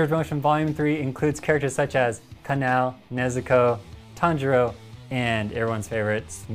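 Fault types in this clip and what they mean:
No faults can be heard anywhere in this audio.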